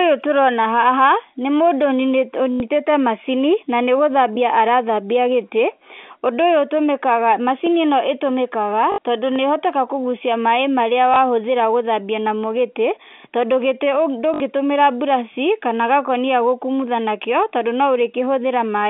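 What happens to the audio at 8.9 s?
From 8.92 to 8.98 s there is packet loss with the last packet repeated. About 60 ms of audio is missing, which fits three 20 ms packets. The receiver replays the last good packet to fill the gap. The repeated run gives a brief robotic stutter.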